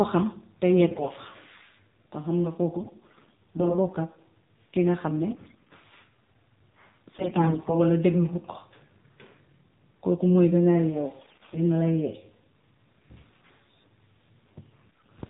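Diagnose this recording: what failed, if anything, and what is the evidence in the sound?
At the codec stage, the speech went through the AMR narrowband mobile codec. Its bandwidth stops at 4 kHz and the voice sounds plainly buzzy and synthetic, which fits the low 7.4 kbps mode.

On the network link, AMR bit errors flipped weakly protected bits. The misplaced excitation pulses make the voice hoarse and gargly at 0.80–1.10, 2.78–3.78, 5.30–5.70, 7.14–7.75, 11.20–11.63 and 14.87–15.10 s.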